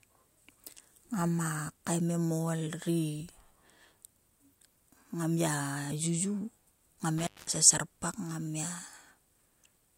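At 7.18 s the speech is hit by an intermittent contact fault, a loose cable or plug briefly opening the signal path. The sound crackles, drops out for about 205 ms, and crackles again as the connection recovers by 7.56 s, leaving faint hiss in the gap. On a waveform this looks like a sudden collapse to near-flat with sharp spikes at both edges. A spectrogram shows thin vertical broadband lines bracketing a dark, nearly empty stretch.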